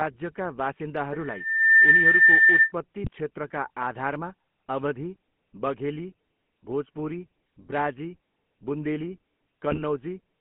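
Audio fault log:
throughout, GSM full-rate codec: the speech has a plainly audible buzzy, gravelly roughness, and nothing reaches above about 3.4 kHz or below about 150 Hz, so it sounds thin and boxed in. This comes from the early GSM coder, which keeps a model of the vocal tract and drives it with a sparse, regularly spaced pulse excitation rather than the real waveform, at a rate that fits 13 kbps.
1.13 to 2.72 s, loudspeaker feedback squeal: a single tone at 1.8 kHz appears, swells over roughly 0.7 s and then sits well above the speech, around 15 dB louder, before stopping. A microphone was picking up the loudspeaker it fed, and at that one frequency the loop gain went past one, so the tone kept feeding itself and growing.
3.04 to 3.09 s and 9.71 to 9.83 s, GSM bit errors: the speech breaks briefly into squawks and gargling pops, the later burst longer and harsher. Corrupted bits reached the speech decoder, so its filter, pitch and gain values were wrong for those frames, bending the spectrum and jolting the level. 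The error rate points to a weak link, about 0.5% in the first burst and nearer 1.9% in the second.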